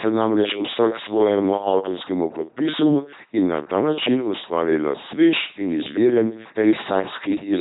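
Throughout, the speech shows heavy LPC-10 vocoder damage. A buzzy robot timbre comes from pulse-or-noise excitation, fitting 2.4 kbit/s. The spectrogram shows rigid harmonics and nothing above 3.8 kHz.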